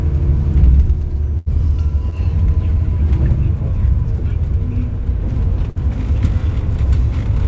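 From 1.38 to 1.48 s, a burst of packet loss meant about 80 ms of audio never arrived in time. The receiver stretched the last received sound across the gap, fading it, and then resumed about 80 ms further on. The result is a held, dimming smear and a small jump forward.

At 2.10 to 2.14 s, short concealed packet loss left a 20 ms hole. The decoder filled it by continuing the preceding sound and blending back into the real signal, which gives a brief wobble.

From 5.70 to 5.77 s, a second burst of packet loss covered roughly 55 ms with the same fading continuation before playback skipped ahead by about 60 ms.

Through the WebRTC call path, the G.722 codec leaves nothing above 8 kHz.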